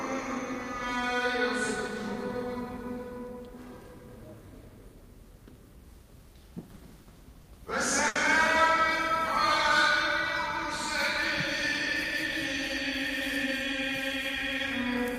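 From 6.61 to 7.48 s there are repeated stalls (stutter). Packets arrive late again and again, so the jitter buffer empties five times. The receiver extends the last sound to cover about 110 ms, the longest hold 50 ms, so the passage drags in jerks. Nothing is skipped, which separates it from a dropout.

At 8.08 s a short stall from a late packet holds one sound for 70 ms before playback resumes from exactly where it paused. It is a single stretched moment with a faint buzz or dip, not a run of hitches like the stutter before it.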